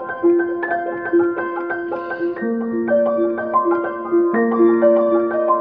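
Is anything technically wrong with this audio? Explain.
No, nothing here stands out as a technical problem; the audio comes across without any glitches or faults worth pointing to.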